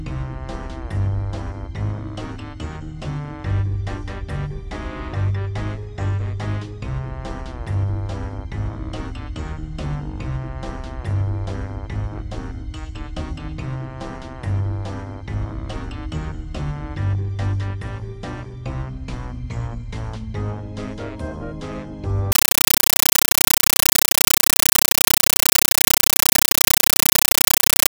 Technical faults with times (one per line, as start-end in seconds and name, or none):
22.32-27.90 compressed stream played as audio